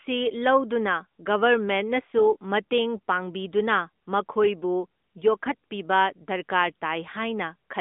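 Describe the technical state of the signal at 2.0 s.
At 2.0 s the signal is intact, with only the narrowband mobile-call character of the AMR codec audible, the sound confined to roughly 200 Hz to 3.6 kHz and showing no fault.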